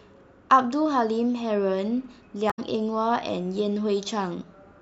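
At 2.50 to 2.59 s there's damaged data in the compressed stream: the decoder hits corrupt frames, loses sync, and you get a brief glitch.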